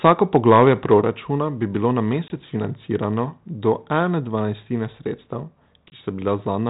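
From 0.05 to 0.63 s the loudest syllables carry a harsh, crackling edge, most likely microphone overload, with peaks driven about 4 dB past the converter's ceiling. On the waveform a small share of peaks sit flattened at a common level, and the spectrogram shows brief broadband smears above them.

At 1.02 s, just before "bi bilo na", voice and background drop together by about 4 dB. This is likely the microphone volume stepped down by the call software reacting to that earlier overload. The waveform envelope shrinks in one abrupt step and stays lower, with no ramp.

The packet loss on the ADPCM call, in G.726 at 32 kbit/s with nothing above 4 kHz, first strikes from 2.28 to 2.34 s, right after "bi bilo na". It cuts a 20 ms hole, a hard-edged blank column on the spectrogram. The sound resumes slightly distorted while the decoder's predictor re-locks. The same happens from 5.9 to 6.01 s.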